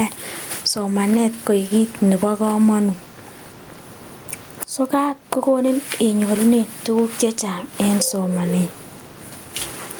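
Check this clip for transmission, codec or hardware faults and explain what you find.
One hardware-side fault runs through the whole recording: gain pumping. The room noise sits about 34 dB below the speech. Peaks and quiet passages land at similar levels, so the speech sounds squashed. The likely cause is microphone gain set far too high, with a fast limiter or compressor clamping down on every loud moment, swinging the level by around 15 dB.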